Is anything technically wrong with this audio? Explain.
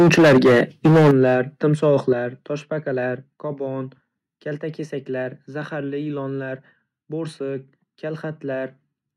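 Yes. From the very start of the speech until 1.34 s the loudest syllables sound harsh and crackly, with flattened, buzzy peaks, driven about 9 dB past full scale so that roughly a fifth of the samples are cut off. A briefer, milder crackle returns between 1.83 and 1.91 s, where peaks only just reach the ceiling and a small fraction clip. This is microphone overload, likely from the input volume being set so high that the converter's limit sliced off the waveform tops.

Twice the whole sound, voice and background together, abruptly becomes quieter: by about 8 dB at 1.11 s, during the first distorted stretch, and by about 7 dB at 2.13 s, shortly after the second crackle. These sudden single-step level drops are the microphone volume stepped down, likely by the call software reacting to the clipping and lowering the device's input volume in one jump each time.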